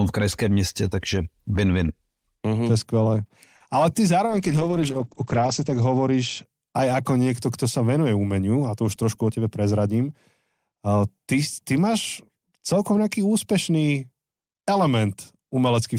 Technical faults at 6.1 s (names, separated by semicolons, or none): call bitrate drop